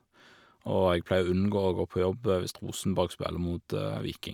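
No technical faults can be heard anywhere in this speech recording. Nothing breaks up, drops out or distorts at any point.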